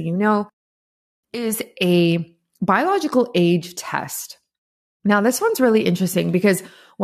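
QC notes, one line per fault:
No fault found in this speech clip.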